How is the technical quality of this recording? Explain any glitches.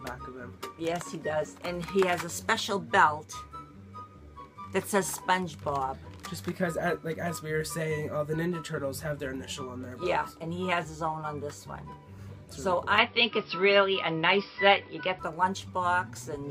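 One glitch stands out: from 12.98 s to 15.19 s the sound abruptly narrows, with nothing above 5.5 kHz, a level shift of a few decibels and a different, low background noise, with no gap at the switch. This is likely an input switched to a poorer device, whose narrower band and own tone and noise floor replace the original until it switches back.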